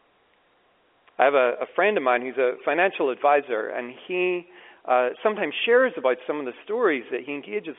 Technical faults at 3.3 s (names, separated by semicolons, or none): none